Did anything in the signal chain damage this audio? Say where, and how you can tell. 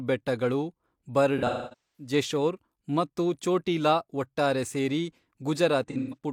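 Yes, in the codec: AAC frame loss with concealment at 1.38–2.12 s and 5.88–6.17 s. The speech turns smeared and phasey as the decoder reuses the last good spectrum. The longest run, about 0.3 s, is filled in rather than left as a dropout's abrupt hard gap.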